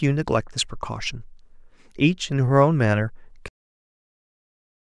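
At 3.48 s the speech stops dead partway through a sound: a cut-off end, where the final stretch of audio was never written out or played back. There is no decay or natural tail. The signal simply drops to digital silence and stays there for the last 1.5 s. On a waveform the envelope ends abruptly mid-sound and becomes a flat line. On a spectrogram the energy across all frequencies stops along a sharp vertical edge, followed by empty black.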